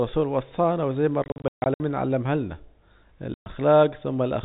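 Packet loss filled with silence: lost packets are replaced by dead air, leaving holes in multiples of 20 ms with hard edges. From 1.24 to 1.8 s, 340 ms drops out in runs up to 140 ms; at 3.34 to 3.46 s, one 120 ms gap cuts through the narrowband G.711 speech.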